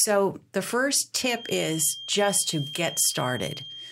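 Speech clip with a feedback whistle. From 1.3 s to the end, a thin 3.2 kHz tone sits about 15 dB below the speech, swelling and fading slowly. Likely a loudspeaker-microphone loop held just short of runaway feedback.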